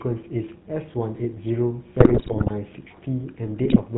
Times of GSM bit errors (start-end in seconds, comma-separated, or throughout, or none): 2.00-2.51, 3.64-3.81